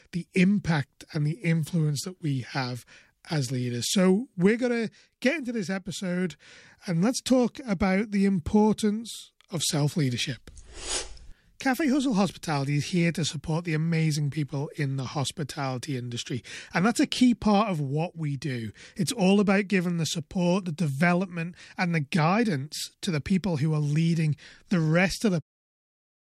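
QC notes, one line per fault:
No faults to note for QC.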